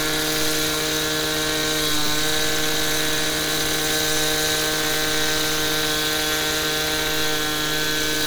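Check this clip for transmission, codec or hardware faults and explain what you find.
One fault is present, a repeated buffer at 2.06 s. New audio failed to arrive in time, so the device replayed its last 10 ms block once more, with a hard join at the repeat. Because the block is so short, it is heard as a click or brief buzz, and roughly 10 ms of audio is lost.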